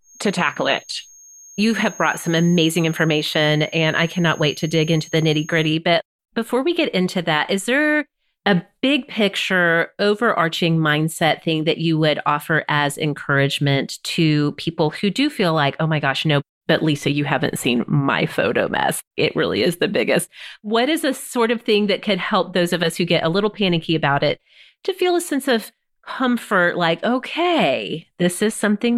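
From 0 to 5.80 s a feedback whistle sits behind the speech: a thin, steady tone at 6.5 kHz, roughly 25 dB below the voice and swelling and fading slowly. It is likely a speaker-to-microphone loop held just short of runaway. On a spectrogram it appears as a narrow horizontal line.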